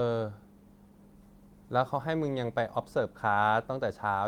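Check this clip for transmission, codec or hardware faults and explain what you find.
No faults turned up anywhere in this speech recording.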